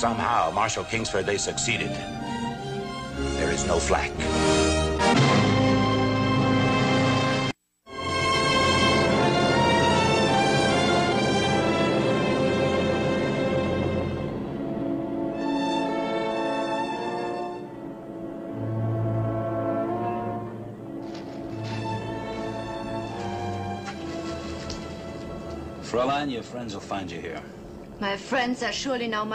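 No technical faults are audible anywhere in the clip.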